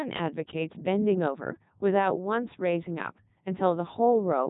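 From start to finish the speech sounds robotic and buzzy, with a synthetic quality and nothing above about 3.8 kHz. This is the Codec 2 vocoder, heavily damaging the audio. Rather than preserving the waveform, it transmits only pitch, voicing, energy and a coarse spectral envelope, and the decoder rebuilds the voice from sine waves. The result fits Codec 2 running at its highest rate of 3.2 kbit/s, where even the best mode discards the original signal's fine detail.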